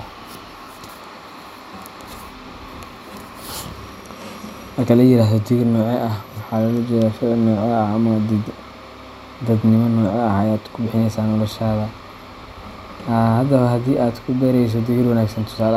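A speech recording, and nothing is technically wrong with it.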